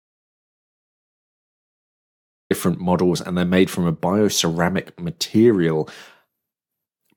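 From the start until 2.5 s the clip is an audio dropout to silence, already under way when it begins: a dead gap with no room tone, likely from lost input, then speech cuts in abruptly. The waveform shows a flat line, and the spectrogram shows a blank region before energy appears.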